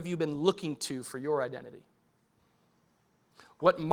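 No faults in this speech; the Opus voice compression is audible only as a light coding texture on a fullband signal, consistent with a hybrid stream at around 24 kbps.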